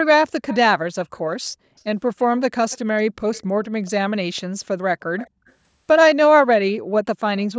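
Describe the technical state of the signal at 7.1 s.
At 7.1 s the speech is intact, with no fault, only the normal effect of call microphone processing, which keeps nothing above 8 kHz and trims the lowest bass.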